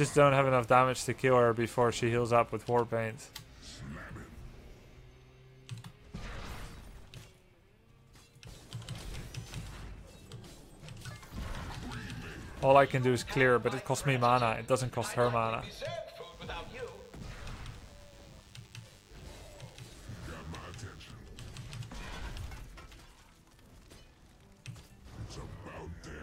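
From 16.21 to 21.13 s, DECT cordless phone buzz: rectified radio bursts every 10 ms make a faint, thin 100 Hz rasp, edgier and more harmonic-rich than smooth mains hum.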